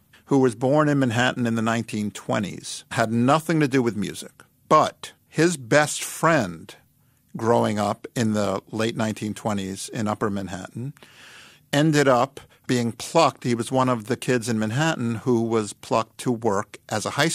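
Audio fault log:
4.84–4.90 s, DAB burbling: a brief burble over the speech, typical of weak-signal DAB where a small residue of bit errors, perhaps around a tenth of a percent, slips past error correction into the MP2 data. Corrupted samples put short blips of noise in individual sub-bands, and corrupted scale factors make sub-bands jump in level for up to a frame. On a spectrogram this shows as scattered rectangular blocks of energy in separate bands, each up to one frame wide. The waveform shows a short, uneven bump in the envelope.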